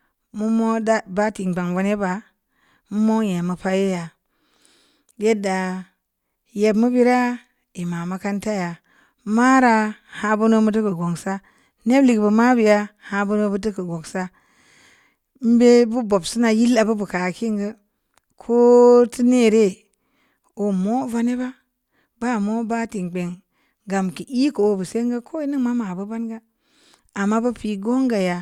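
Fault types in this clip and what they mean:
No technical faults can be heard anywhere in the speech, and the signal stays steady and continuous throughout.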